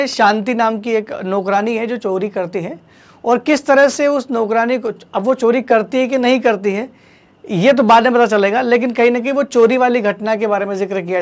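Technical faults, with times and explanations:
No technical faults can be heard anywhere in this audio. Nothing in the sound needs to be marked with a time or explained.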